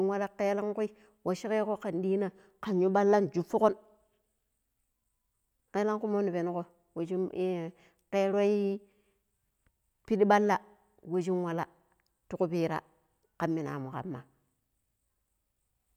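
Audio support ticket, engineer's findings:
Listened through the speech clip and nothing stood out; no findings to log.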